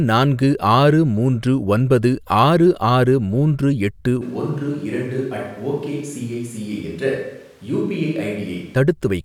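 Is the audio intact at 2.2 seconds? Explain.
Yes, the speech at 2.2 seconds is intact, with no technical fault heard at that moment.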